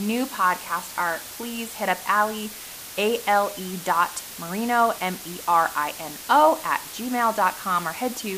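Low bit depth with dither runs through the whole of this speech clip, from start to finish. The signal has been reduced to very few levels, which fits about 6 bits, and dither was added before rounding, so the quantisation error is spread into steady white noise instead of distortion. The result is a constant, even hiss sitting only around 15 dB below the speech, with the voice itself free of grit or crunch.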